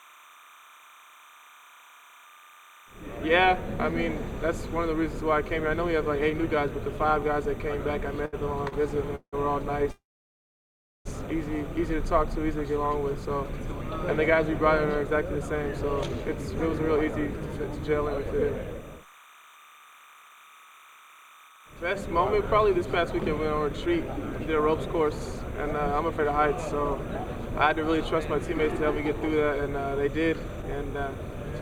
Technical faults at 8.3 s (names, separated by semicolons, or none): timecode bleed; repeated stalls (stutter)